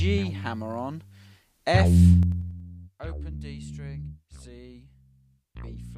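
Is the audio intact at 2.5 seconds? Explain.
No. Zipper noise runs from 2.14 to 2.60 s: the level falls by roughly 15 dB in unsmoothed 3 dB jumps, about ten a second, and each abrupt step leaves a small click, heard as a ticking zipper riding on the sound.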